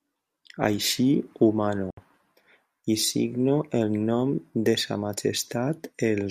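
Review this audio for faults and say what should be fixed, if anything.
A 69 ms dropout to silence runs from 1.90 to 1.97 s, just after "ho mano", likely a Bluetooth stall, where delayed packets left the receiver's buffer empty. Record over a wired connection or keep the Bluetooth link short and free of interference.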